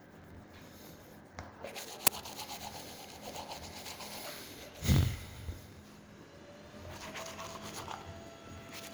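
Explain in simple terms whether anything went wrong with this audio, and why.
Two things went wrong here. Throughout the clip there's a block size mismatch (truncated). One stage hands over chunks of audio, which fits 1,024-sample blocks, but the next stage reads less, so the end of each chunk gets dropped. That leaves a steady buzz at about 45.9 Hz, and everything runs 1.07 times fast while its overall tone colour stays the same.

Then at 2.07 s there's an uninitialised buffer. A block of about 10 ms was played before any real audio had been put into it, so leftover junk in memory came out as a sudden, loud crack or burst of digital noise.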